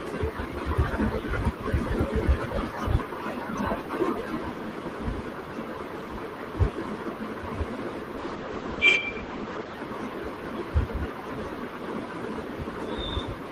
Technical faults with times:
8.22-9.85 call bitrate drop

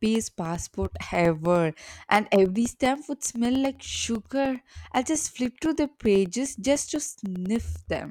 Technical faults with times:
0.05-8.06 periodic USB or driver dropouts

